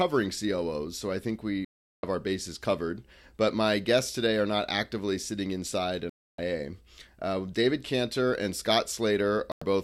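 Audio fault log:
1.65–2.04 s, 6.10–6.39 s, 9.52–9.62 s: digital broadcast dropout. The audio mutes for 0.38 s between "so I think we" and "our bases covered", for 0.29 s after "not actively sitting inside", and for 0.10 s near the end. The receiver stops decoding when frames are lost or corrupted and stays silent until clean ones arrive, so that stretch of the programme is gone. The gap lengths fit whole frames of about 32 ms. On a waveform each gap is a flat line. A spectrogram shows a clean, full-height blank column.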